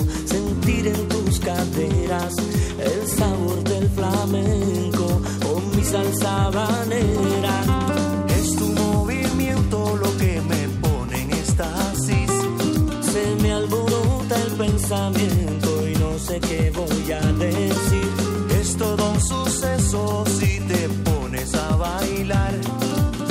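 From 0.11 s to 23.28 s, clock slip clicks form a steady rattle about twenty times a second, likely unsynchronised clocks a few hundred ppm apart; evenly spaced, unlike random dropouts.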